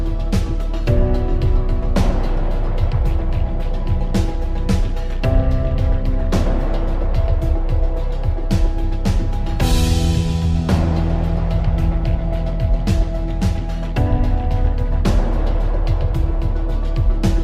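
Nothing goes wrong anywhere here; there's no dropout, glitch or distortion to point to at any moment.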